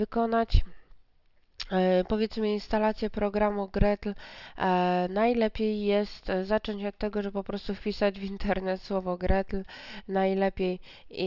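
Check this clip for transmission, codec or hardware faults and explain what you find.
Nothing here points to a problem with transmission, the codec or the hardware, so there's no fault to report.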